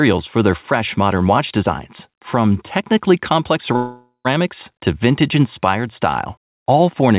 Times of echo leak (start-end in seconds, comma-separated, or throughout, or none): none